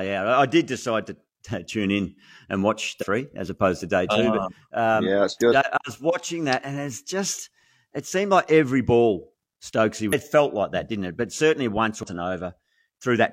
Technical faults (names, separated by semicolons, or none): damaged data in a compressed stream